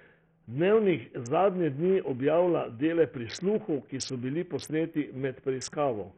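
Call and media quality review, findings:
Throughout: likely Bluetooth SBC compression with a starved bit pool; upper sub-bands get no bits, treble flickers, drops out, gritty aliasing over speech, fits 48 kbps.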